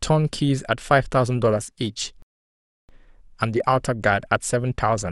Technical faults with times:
2.22-2.89 rebuffering stall

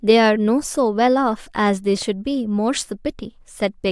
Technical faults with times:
none

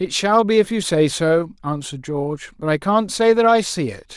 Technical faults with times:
none

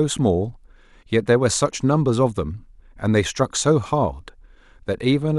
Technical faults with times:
none

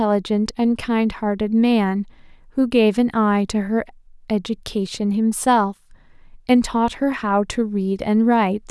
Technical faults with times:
none

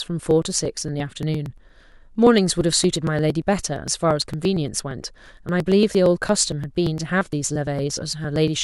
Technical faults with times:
0.08-8.48 periodic USB or driver dropouts

